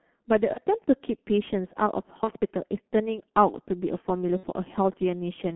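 The whole clip of speech passed through the G.723.1 codec at a heavy setting, with a line band of 200 Hz to 3.4 kHz, running at 6.3 kbit/s with coarse 30 ms frames. The slow, coarse voice model leaves the speech muffled and hoarse, with smeared consonants.

VoIP packet loss concealed by the speech codec occurs at 0.53 to 0.58 s and 2.24 to 2.30 s, each consistent with one missing 30 ms frame, then at 4.37 to 4.47 s, matching two frames or 60 ms. The decoder repeated its last pitch and filter with falling gain, so each gap becomes a fading buzzy tone or coloured noise before speech recovers.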